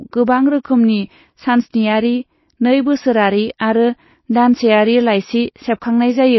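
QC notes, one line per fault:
Throughout, likely MP3 compression: nothing above 5.8 kHz, and s sounds swirl as weak lines flicker between frames, unlike a clean low-pass filter. This fits about 24 kbps.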